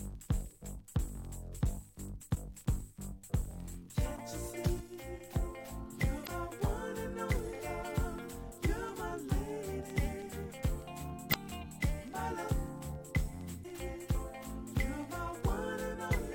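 Damaged data in a compressed stream at 2.31–2.37 s, 6.23–6.29 s, 11.30–11.36 s and 13.60–13.65 s: corrupted frames throw the decoder off sync, producing brief glitches of about 55 ms.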